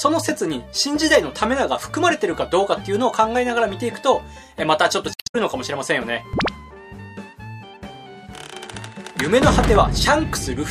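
Around 5.11 to 5.35 s there's damaged data in the compressed stream: the decoder misreads corrupted frames, loses sync, and spits out a brief glitch.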